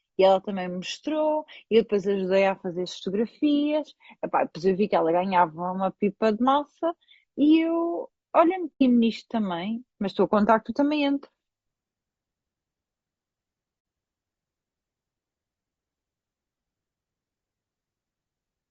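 Throughout this speech clip the voice sounds rough and grainy, with noise filling the gaps between harmonics and a thin, synthetic-sounding top band. That points to low-delay AAC compression, likely AAC-ELD at a rate around 32 kbps, whose short frames can't resolve pitch harmonics cleanly. The sound also briefly fades to silence and back from 8.73 to 8.82 s (90 ms) and from 13.79 to 13.85 s (60 ms). This is AAC frame loss with muting. The decoder zeroed the missing frames, consistent with three and two lost frames, and the overlapping windows soften the edges of each gap.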